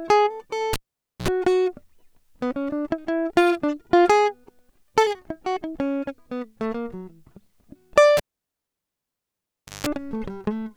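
Cable pulled and plugged in, at 0.73 to 1.28 s and 8.17 to 9.87 s: the live lead is yanked, giving a pop and near silence of 0.5 s and then 1.64 s. As the plug's tip touches first, mains buzz bursts in, 61 ms at 60 Hz and then 168 ms at 50 Hz, before a second pop restores the music.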